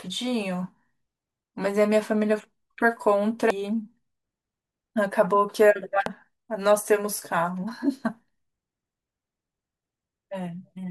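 At 3.50 s a tiny blip cuts into the speech. It returns at 6.06 s, just as short. Both are damaged data in a compressed stream. Some bytes in the encoded file were lost or overwritten. The decoder misread the frame there and lost its place in the stream. It then had to hunt for the next valid frame header. Each event lasts only a few milliseconds and is heard as a brief glitch.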